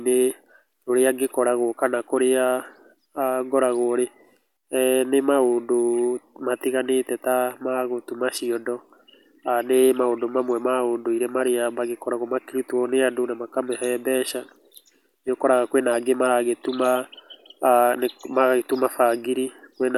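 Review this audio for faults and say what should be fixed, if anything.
No faults heard; nothing in this recording needs fixing.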